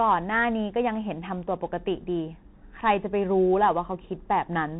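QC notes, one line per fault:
throughout, Bluetooth CVSD headset codec. The speech is narrowband, with nothing above about 3.9 kHz, which fits the 64 kbps CVSD link of a headset. This codec sends one bit per sample, marking only whether the waveform rises or falls, with a step size that adapts over time. Fast, loud high-frequency sounds outrun that step and smear into distortion. S sounds come out scratchy. A grainy hiss sits under the voice. The damage is plainly audible.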